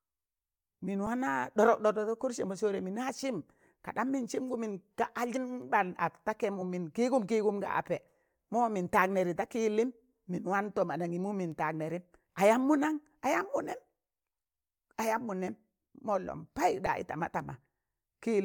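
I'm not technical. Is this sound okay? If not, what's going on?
No. The speech has compressed frames skipped at 5.36, 6.60 and 16.26 seconds. Tiny chunks of the file, a few hundredths of a second each, never play, so the speech jumps ahead. Unlike a dropout, there's no silence; the speech simply skips forward.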